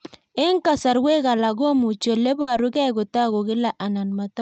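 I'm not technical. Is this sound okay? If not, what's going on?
No. At 2.41 to 2.50 s there is a burst of packet loss. On a call, audio travels in small packets, and a short run of them failed to arrive in time. The receiving end filled about 60 ms by stretching out the last bit of speech and letting it fade, which sounds like a brief buzz or hiss. About 60 ms of speech never arrived at all, so the talking picks up slightly further along.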